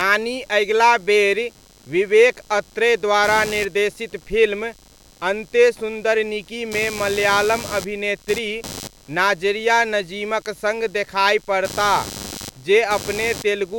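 Throughout the recording, computer activity noise sits under the speech as a buzzy chirping of around a hundred pulses per second, roughly 20 dB below the voice. Load changes of the processor, graphics card or mouse are disturbing the audio ground. Unlike steady mains hum, it shifts with the machine's workload rather than staying constant.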